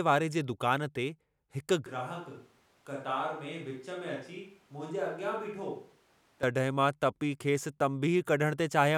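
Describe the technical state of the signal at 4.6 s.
At 4.6 s the speech sits inside a switch to a distant microphone (1.86 to 6.43 s, starting just before "मां तपी"): abruptly roomy, thin, about 10 dB quieter, with faint background noise. The likely cause is a far-off mic replacing the close one. Unlike added reverb, it starts and stops as sudden cuts.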